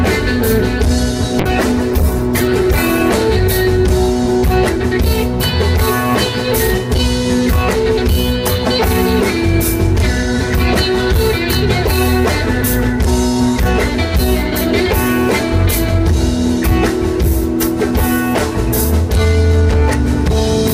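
From 1.4 s to about 3.11 s a call bitrate drop makes the sound turn rough, watery and muffled for roughly 1.6 s. The coarse coding and missing treble suggest a fall from about 128 kbps to about 13 kbps. Unlike packet loss, the audio stays continuous with no gaps.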